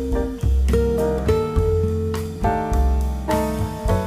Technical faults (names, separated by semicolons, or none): none